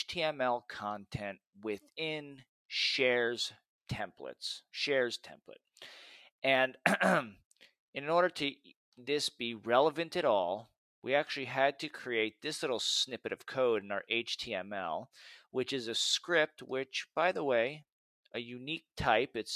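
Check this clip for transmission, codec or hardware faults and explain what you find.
No transmission, codec or hardware faults can be heard anywhere in the recording, and the signal stays steady and intact throughout.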